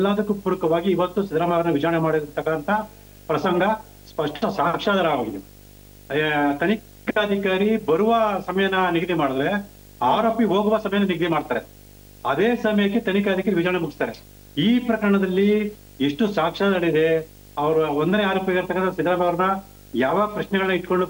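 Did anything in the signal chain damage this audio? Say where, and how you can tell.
Yes. Video or display buzz enters through the analogue wiring throughout. A 50 Hz buzz with hash sits around 25 dB below the sound, plus a 15.6 kHz line-rate whine.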